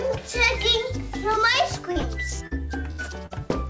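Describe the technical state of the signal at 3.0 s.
At 3.0 s you're inside a burst of packet loss, 2.91 to 3.01 s: the receiver stretches and fades the last sound for about 74 ms, then resumes with roughly 80 ms skipped.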